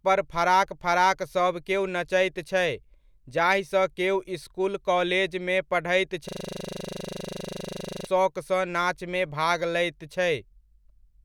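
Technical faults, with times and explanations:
6.29–8.07 s, system hang loop: right after "केओ इसकुल काॅलेजमे पढ़ैत" the speech freezes into one 40 ms slice repeating about 45 times, giving a steady 25 Hz buzz while the driver stalls and the hardware keeps replaying its ring buffer, until "शौकसँ नाचमे भाग लैत" resumes.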